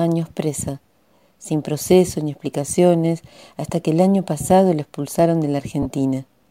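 Near the end, from about 5.82 to 5.86 s, the sound turns briefly into a noisy, grainy smear where lost LE Audio frames were concealed. About 30 ms of audio went missing, which fits roughly four short LC3 frames. The decoder filled the gap by replaying the last spectrum with randomised phase. Unlike a plain dropout, the gap is never silent or clicked off: the sound blurs into hiss and then recovers. The light lossy compression elsewhere stays faint by comparison.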